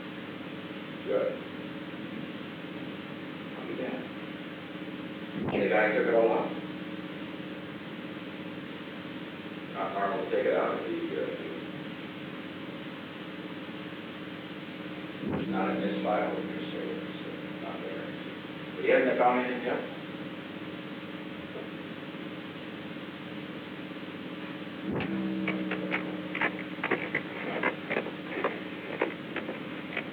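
No technical faults are audible anywhere in the recording.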